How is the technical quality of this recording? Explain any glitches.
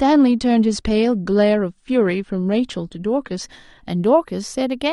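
The quality is limited at the start by an adaptive stream starting at a low bitrate. From 0.00 to 3.43 s the player was on a low-bitrate version while it gauged the connection. Nothing is present above 9.7 kHz, so the speech sounds dull, with stronger codec artefacts, which fits roughly 32 kbit/s AAC. At 3.43 s the quality jumps without a gap, consistent with a step to around 96 kbit/s.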